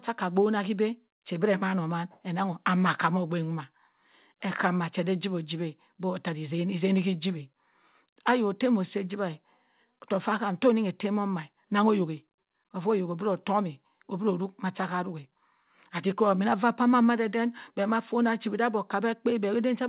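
No technical faults are audible.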